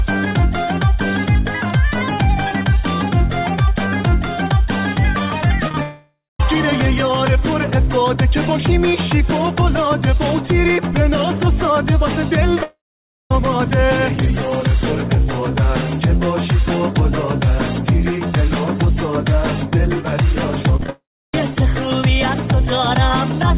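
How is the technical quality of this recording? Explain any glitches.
The recording has clear network glitches: a cluster of brief concealed losses, three long dropouts, and a burst of choppy loss. The audio is band-limited, with nothing above 4 kHz, which points to a narrowband telephone codec such as G.711 on the call path.

Short concealed packet loss occurs at 5.67 s, then from 5.68 to 5.71 s and from 5.71 to 5.74 s. Each hole is only a few hundredths of a second. The receiver bridged it by extending the preceding sound and blending back into real audio. It comes across as a quick smear or wobble. Unlike a dropout, the sound never stops, and unlike robotic loss, there is no sustained choppiness.

Long network dropouts run from 5.82 to 6.40 s, from 12.63 to 13.31 s, and from 20.90 to 21.43 s. The most likely cause is audio failing to arrive for nearly half a second or longer. Each begins with a fading buzz or hiss continuing the last sound, then gives way to silence lasting roughly a quarter, half and a third of a second respectively. 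The audio resumes further on with that stretch missing. The audible gap and lost material set these apart from short concealment.

Repeated packet loss (robotic sound) runs from 20.76 to 20.89 s. Four gaps, the longest 28 ms, were each patched, and about half this stretch is synthetic fill. The rapid alternation of real and extended sound gives a choppy texture with fragments missing. It leads straight into the third dropout at 20.90 s. Its repetition distinguishes it from an isolated short loss.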